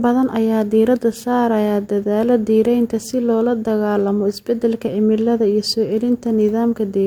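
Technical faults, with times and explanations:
No technical faults found in this speech recording.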